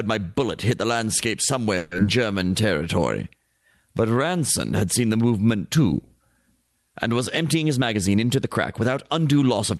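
From 1.77 to 2.00 s, just after "bullet hit the landscape", the sound turns into a buzzy continuation that fades without any silent gap. On a spectrogram, the last harmonics smear flat and decay. This is a long network dropout, likely from packets not arriving in time. About 80 ms is never heard, and the receiver appears to have raised its buffering delay by around 70 ms afterwards.

From 2.31 to 2.67 s, a jitter buffer slow-down follows as the receiver rebuilds its reserve. It repeats pitch periods, adding 61 ms, so the sound runs at 86% speed with unchanged pitch. The waveform shows runs of near-identical cycles, and spectrogram harmonics stay level while syllables stretch.

From 7.54 to 9.23 s, after "and was", a jitter buffer speed-up trims short pitch-period slices totalling around 150 ms. The sound plays at 107% speed and feels hurried at the same pitch. The spectrogram shows compressed formant transitions, and the waveform has splice points where cycles were cut.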